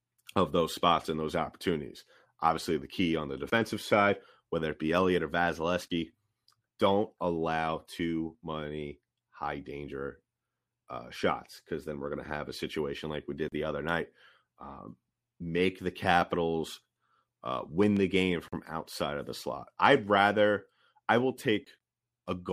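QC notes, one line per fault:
17.83–17.99 s, loud pop: a quick double pop, two sharp thumps close together, landing just before "the game from outside" and poking a few dB above the speech, which keeps going underneath without a break. That pattern is likely a voltage spike getting into the chain, say a connector being jostled, a switch, or a static discharge, with the circuitry downstream rounding off each pulse, so it comes across as a thump.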